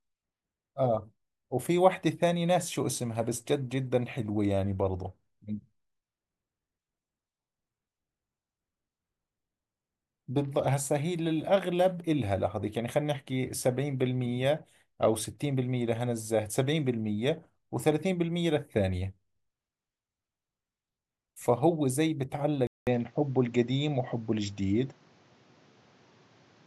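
Input switched to a poorer device at 22.67 s, lasting to the end. A 200 ms silence marks the switch. The speech then loses everything above 7.6 kHz and turns duller, with a faint new background noise well beneath it and little change in level. The cause is likely a different microphone taking over the input.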